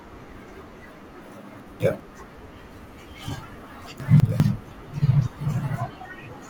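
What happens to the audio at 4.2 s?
The speech around 4.2 s has chunks out of order: between 4.0 and 4.4 s, a 200 ms chunk arrived one chunk late and plays after its successor. The result is a jumbled moment with three hard joins. Unlike a dropout or skip, nothing is missing; the pieces are swapped.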